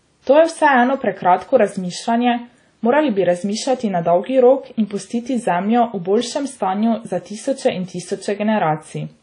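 WMA compression, present throughout the clip: the speech has a ringing, washy quality, with a hiss that swells and fades along with the signal, and nothing is heard above 10.1 kHz. This is likely lossy transform coding with long blocks, which smears quantisation noise over tens of milliseconds around each sound and drops weak spectral detail entirely. The damage is plainly audible and fits a low bitrate of around 32 kbps.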